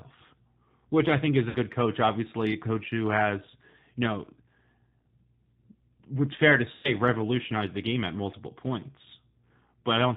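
G.729 codec damage runs through the whole clip: the speech is rebuilt from a vocal-tract filter, a pitch predictor and a few pulses per frame, with nothing above 4 kHz. The plainly audible rough, slightly synthetic texture fits an 8 kbit/s G.729A link.

VoIP packet loss concealed by the speech codec occurs at 1.49 to 1.58 s and again at 6.75 to 6.91 s. About 60 ms and then 90 ms of audio went missing, and the decoder extrapolated from its last pitch and filter, stretching the sound into a buzzy tone or coloured noise that fades and that stays weak for a moment after packets return.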